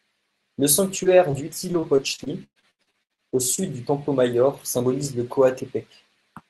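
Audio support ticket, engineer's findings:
Short concealed packet loss, twice: 1.03–1.08 s and 1.31–1.36 s. Brief smear/wobble in the speech, about 20 ms of audio missing each time. Jitter buffer/decoder concealment stretched the last bit of sound across the hole, then cross-faded back into the real stream.

Lost packet rebuilt from error correction, inside both of those windows: 1.05–1.07 s and 1.33–1.35 s, 20 ms each. A grainier, noisier patch rather than a dropout. Opus in-band FEC did this: the next packet carried a low-rate copy of the lost one, and the decoder played that copy instead. Reduced quality, no gap. The codec's roughly 12 kHz band limit applies across the whole call, so the top-end dip is less obvious here.

Repeated packet loss (robotic sound), 1.72–3.61 s. Choppy stretch with chunks dropping out. More than a dozen gaps, the longest about 118 ms. Roughly 29% of that span is concealment fill, and around 150 ms of it came back via FEC. 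The network delivered packets late or lost them in a burst, so the receiver kept patching one hole after another. Look at the jitter and loss stats for that window.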